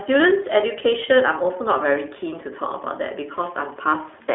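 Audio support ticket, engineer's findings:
iLBC codec, throughout. Band-limited telephone sound, roughly 300 Hz to 3.4 kHz, nothing above 3.6 kHz; plainly audible rough, synthetic texture. Spectrogram: hard ceiling near 3.6 kHz, empty above. Waveform: excitation re-coded independently per block, with a grain consistent with 20 ms frames, fitting iLBC's 15.2 kbps mode. Component: VoIP encode stage on the call path.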